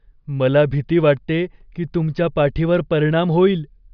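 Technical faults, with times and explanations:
No technical faults are audible anywhere in the speech recording, and the signal carries no defects.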